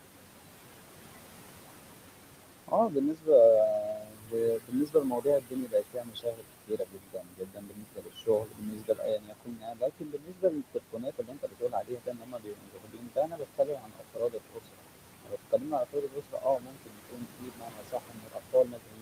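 A noise suppressor is running on this speech clip throughout, pulling down whatever it judges to be steady noise by about 21 dB frame by frame. The room noise, sitting roughly 10 dB below the voice, is being gated in and out, so it drops away in gaps and swells back under speech. Worse, there is speech cut by the noise suppressor here. The suppressor mistakes parts of the voice for noise and attenuates them by as much as about 22 dB. This happens from 2.68 to 3.29 s (around half a second affected), through nearly all of 3.79 to 14.89 s (about ten seconds), and again from 15.24 s to the end at 19.01 s. In those stretches soft consonants, word endings and quieter phrases are swallowed or left faint.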